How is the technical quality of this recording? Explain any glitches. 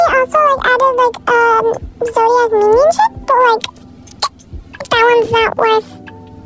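No glitches or technical faults are audible anywhere in the recording.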